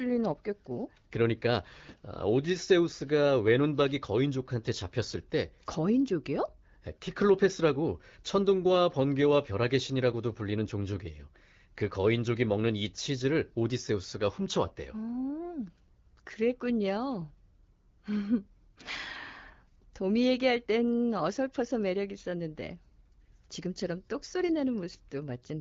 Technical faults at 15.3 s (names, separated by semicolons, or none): none